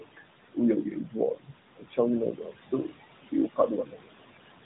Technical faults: noise suppressor artifacts; speech cut by the noise suppressor

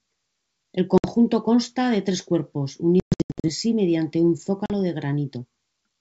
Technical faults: packet loss on an ADPCM call

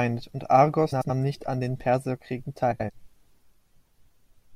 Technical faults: frames out of order

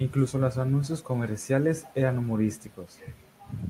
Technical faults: none

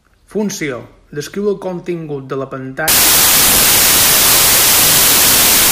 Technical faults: wrong sample width

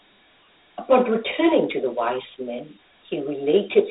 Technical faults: Dialogic VOX ADPCM

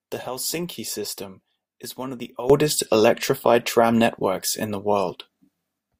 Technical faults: sudden gain jump

